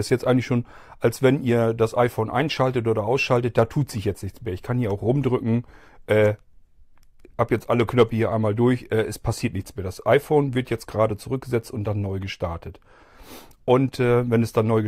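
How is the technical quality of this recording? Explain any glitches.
The speech recording has no audible glitches or technical faults.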